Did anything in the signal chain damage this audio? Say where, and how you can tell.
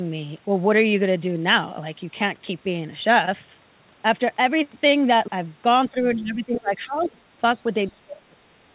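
Yes, the damage sits in the call processing stage, in the echo canceller. The speech is suppressed in double talk from 5.91 to 7.19 s, where roughly a second of it is pulled down by as much as about 20 dB. It happens again from 7.9 s to the end, dropping by about 25 dB. On the waveform the envelope pinches in. On the spectrogram the band, already capped near 4 kHz by the narrowband call path, weakens. The likely cause is the suppressor mistaking simultaneous talk for echo and attenuating the near talker.

The other side's voice is leaking through in two brief scraps. The first runs from 7.01 to 7.08 s at about 25 dB below the speech, and the second from 7.55 to 7.59 s at about 35 dB below. Each is heard as a faint second voice. On the spectrogram these show as short, weak harmonic streaks, barely lifting the waveform. This is likely residual loudspeaker echo that the canceller failed to subtract from the microphone signal.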